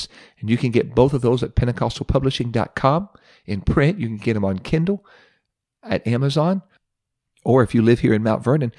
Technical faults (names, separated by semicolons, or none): none